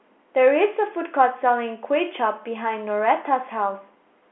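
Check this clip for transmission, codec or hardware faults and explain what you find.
Nothing faulty can be heard: the speech sits in a telephone band of about 250 Hz to 3.4 kHz with nothing above 3.8 kHz, which fits ordinary 64 kbps G.711 A-law coding working normally and adding no more than faint damage of its own.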